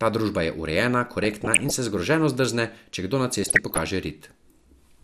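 A short speech clip that sounds dull and plainly gurgly all the way through, with the top end thinned out and a grainy edge on the voice. That's likely MP2 compression run at a low rate, something like 80 kbps, where upper sub-bands get starved of bits and drop out. On top of that there's DAB burbling from 1.24 to 1.78 s and again from 3.44 to 3.83 s, bursts of noise where bit errors of well under one percent slipped past error correction and put short blips of noise into individual sub-bands.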